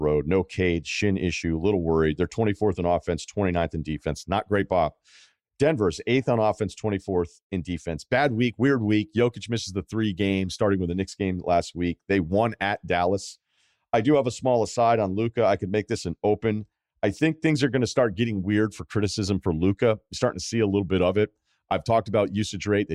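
No technical faults are audible anywhere in this speech recording.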